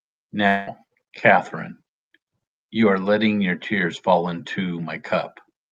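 From 0.47 to 0.69 s, the speech becomes a fading buzz or hiss extending the last sound, likely a long network dropout; roughly 200 ms is lost.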